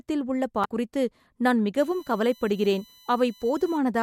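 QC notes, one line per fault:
0.64 s, damaged data in a compressed stream: a short run of corrupted bytes made the decoder misread a frame, lose sync and hunt for the next frame header. The result is a brief glitch immediately before "குறித்து நான்".
1.78–3.78 s, USB whine: current drawn by the USB bus in 1 ms frames leaks into the audio path through power or ground. This adds a fixed-pitch whine on a 1 kHz series, strongest at 4 kHz, around 30 dB below the speech, beginning after "குறித்து நான்".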